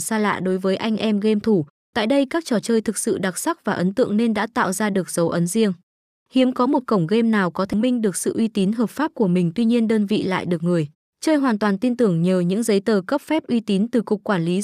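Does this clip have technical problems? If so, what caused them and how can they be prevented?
Yes. At 7.73 s, right after "cổng game nào có", the speech breaks with a brief tick and near-silence lasting only a few milliseconds, then resumes at "minh được sự uy" from a different point in the recording. This is a CD skip: a knock or a flaw on the disc threw the laser onto a neighbouring turn of the spiral, so the player muted briefly and picked up a whole number of disc revolutions away. To prevent it, keep discs clean and unscratched, isolate the player from vibration, or rip the disc with an error-checking extractor.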